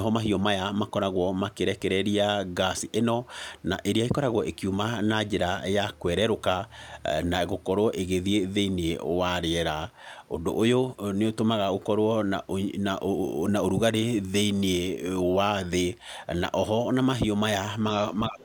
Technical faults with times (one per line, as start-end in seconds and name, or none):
18.28-18.44 speech suppressed in double talk
18.40-18.44 other side's voice leaking through